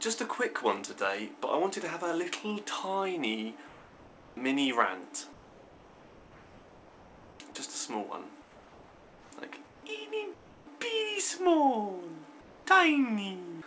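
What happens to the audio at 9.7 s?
From 9.65 to 9.83 s, comfort noise replaces the background: for about 180 ms the real background gives way to steady, featureless noise about 4 dB quieter, likely from discontinuous transmission filling a pause.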